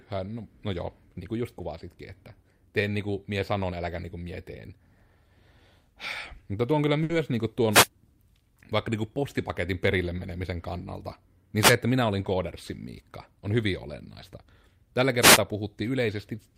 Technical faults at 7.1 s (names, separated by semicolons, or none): short stall from a late packet